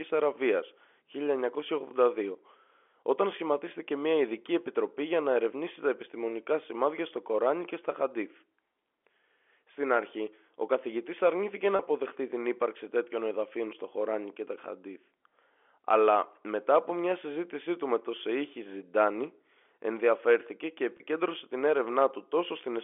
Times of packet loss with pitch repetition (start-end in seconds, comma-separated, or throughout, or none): 11.76-11.79, 20.97-21.00